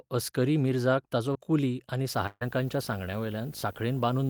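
At 1.33 to 1.37 s, between "असकरी मिर्झाक ताचो" and "कुली आनी", the speech briefly smears, with a slight wobble where a sliver of sound seems to drop out. This is short concealed packet loss. A few hundredths of a second of audio arrived too late for the decoder. The receiver patched about 14 ms by extending the preceding sound and then blended back into the real signal, while roughly 20 ms of the original never got through.

From 2.14 s to the end, right after "मिर्झाक ताचो कुली आनी", a low buzz sits under the speech with gritty hash above it and a whine at about 15.6 kHz. This is video or display buzz. A screen or video cable is coupling into the audio path. The buzz follows a 50 Hz picture field rate, and the high tone comes from the line scan. It runs at around 25 dB below the speech.

Inside that stretch, from 2.27 to 2.43 s, the last sound is held and fades away, and the speech then jumps ahead. 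This is a burst of packet loss. Several consecutive packets went missing, about 140 ms in all. The receiver filled the gap by continuing the last sound and turning it down as the gap went on, and about 10 ms of the gap is silent. The 140 ms of speech in the gap is lost.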